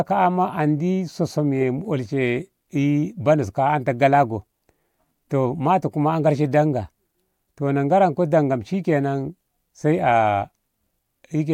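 A speech recording with no technical fault to point to. Nothing in it calls for a time or a cause.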